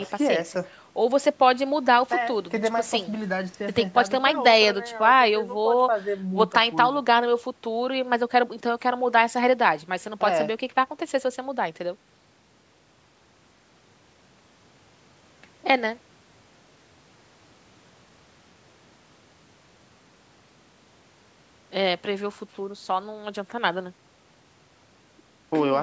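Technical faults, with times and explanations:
No technical faults are present in this speech clip. The call microphone processing can be heard doing its normal job, with the lowest bass trimmed away and nothing above 8 kHz.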